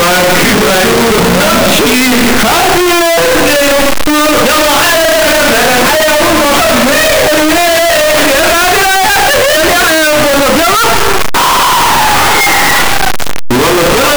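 The audio runs about 14 s and is distorted from start to finish. Soft passages come through as loud as strong ones, so the level never seems to relax. This is the sound of signed and unsigned samples mixed up. The likely cause is 16-bit signed data being read as unsigned, or the reverse. That flips the top bit of every sample. Each time the waveform crosses zero, it jumps across the whole range.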